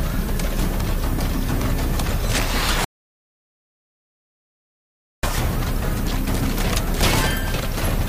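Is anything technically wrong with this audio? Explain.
Yes. Throughout, low bit depth with noise shaping leaves a steady, thin hiss that climbs toward the treble. The audio seems reduced to about 7 bits. Its rounding error is pushed upward and sits not far below the signal.

From 2.85 to 5.23 s there is a rebuffering stall. Playback drops to silence for about 2.4 s, then resumes exactly where it stopped. Nothing is lost.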